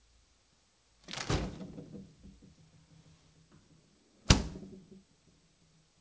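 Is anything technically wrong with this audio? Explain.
No, nothing is technically wrong with this audio.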